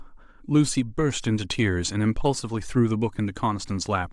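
No technical faults can be heard anywhere in the speech, so there is nothing to place in time order.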